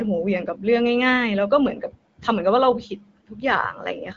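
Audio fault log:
Nothing stood out on listening to this speech clip.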